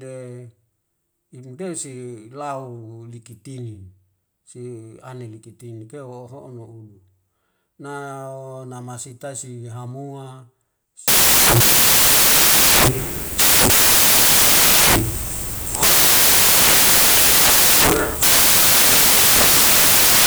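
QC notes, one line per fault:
11.08–20.27 s, samples built from the wrong bytes: from just past the 11-second mark to the end of the clip, the speech gives way to loud, harsh broadband noise. The reader is putting each sample's bytes together wrongly, off by a byte or in swapped order, so the jittery low-order bits end up driving the big part of every value. That's why it sounds like broadband static rather than distortion.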